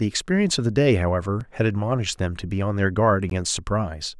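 At 1.40 s and 3.30 s, the speech drops into a block of digital silence, about 5 ms then 16 ms, likely from unfilled output buffers (the first fits 128 samples). The first sounds like a tick, the second like a short hole. Waveforms show flat gaps, spectrograms vertical clicks.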